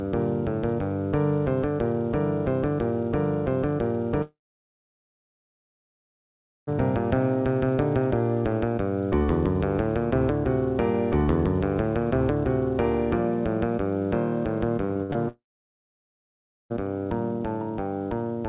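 Audio passed through a call link, heard as band-limited sound with nothing above 4 kHz, consistent with G.711 mu-law at 64 kbps. From 4.22 to 6.69 s and again from 15.28 to 16.72 s the sound stops, briefly carried on as a fading buzz before near-silence. The audio resumes later with the gap's content gone, the hallmark of a long network dropout, likely a stalled connection, unlike brief stutters. Between 14.85 and 15.16 s, five short holes, the longest 60 ms, chop the sound, with about half that span patched over, giving choppy sound with pieces missing. That is repeated packet loss, where quick successive gaps alternate with real audio rather than one sustained silence.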